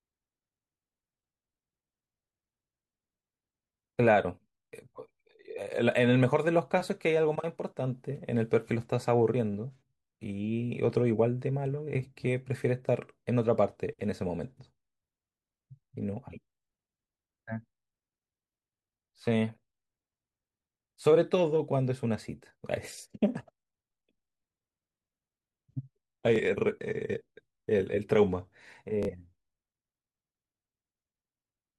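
At 26.36 to 26.40 s, then again at 29.03 to 29.09 s, the speech breaks into Bluetooth stutter: late or missing packets left the receiver replaying its last short buffer. The first gap, about 23 ms, fits one lost frame and sounds like a brief hiccup. The second, about 46 ms, fits two and becomes a tiny buzz. On a waveform, identical slices repeat. A spectrogram shows copied vertical bands, and the speech then resumes slightly ahead.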